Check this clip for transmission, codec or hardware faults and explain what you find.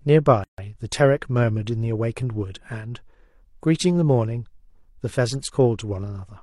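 One fault is audible in this speech clip: a gap at a join of encoded pieces. From 0.44 to 0.58 s the speech drops into silence for about 145 ms. The edges are smeared by the codec. Then the speech resumes exactly where it stopped. Two separately encoded segments were joined without trimming. The encoder's start-up delay and the padded final frame both remained, leaving a short dead hole in continuous sound.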